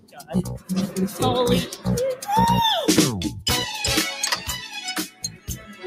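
A noise suppressor built for speech has been applied to this sound and stays active for the whole clip. Because it treats steady, sustained material as noise, its gain swings by roughly 15 dB. Held parts and decays sink while sharp onsets pass, so the level pumps and thins. A simple gate would open and close on overall level, but this control follows how steady the sound is.

The sound is cut by the noise suppressor in four places. The deepest cut is at the start, from 0.0 to 0.32 s, down about 18 dB. Milder dips follow from 0.88 to 1.19 s, about 7 dB, and from 1.7 to 1.86 s, about 10 dB. From 5.06 s to the end, the sound is pulled down about 15 dB. Unlike dropouts, none of these falls to silence or clicks. The level sinks while transients stay.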